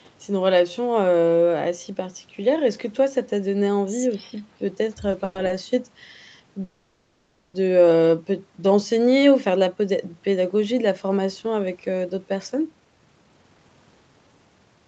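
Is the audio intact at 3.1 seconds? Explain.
Yes, the audio is intact at 3.1 seconds, with no dropout, glitch or other fault at that moment.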